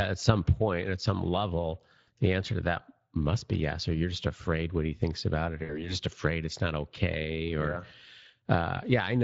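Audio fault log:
Throughout: Speex codec. Speech carries a clearly audible grainy, hoarse edge because the CELP coder has few bits for the excitation, which fits a mid-range setting of roughly 20 kbps.
2.01–2.10 s and 5.63–5.96 s: VoIP packet loss concealed by the speech codec. About 60 ms of audio drops out each time. The decoder stretches its last pitch and filter into a fading buzzy tone or coloured noise. After each gap the voice stays weak or distorted for a short while as the decoder recovers.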